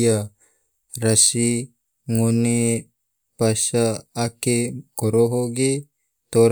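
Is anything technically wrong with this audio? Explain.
No, nothing technically wrong can be heard anywhere in this speech recording.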